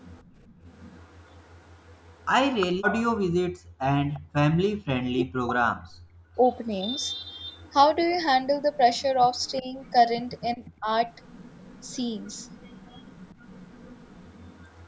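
From 0.00 to 2.67 s a faint delayed copy of the speech trails the talker by about 354 ms, around 30 dB down. This is an echo leak, likely from a far-end loudspeaker whose echo canceller let residual pickup return down the line. Between 0.24 and 0.64 s the room background is gated by the echo canceller: the mic is pulled down by about 20 dB for roughly 0.3 s in total, so the ambience dips and then recovers.

From 3.56 to 6.38 s the speech is suppressed in double talk, likely because both ends spoke at once and the canceller attenuated the near talker along with the echo. Across roughly 1.5 s the voice dips or breaks up, at worst by some 40 dB. Inside that span, 4.14 to 4.19 s carries a brief echo leak at the same 354 ms delay, roughly 25 dB below the speech. From 6.13 to 6.35 s the background gates again by about 20 dB, for around 0.2 s.

From 6.76 s to the end the echo leak returns, again at 354 ms delay and roughly 25 dB down, likely the same uncancelled loudspeaker path. 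Within it, 9.61 to 10.88 s has milder double-talk suppression, with the speech ducking by about 15 dB for roughly 0.2 s.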